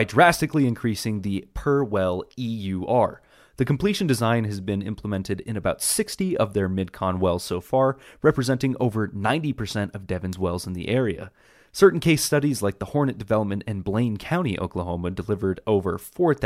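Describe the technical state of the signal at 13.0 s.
At 13.0 s the speech signal is intact, with no dropout, clipping, distortion or other fault at that moment.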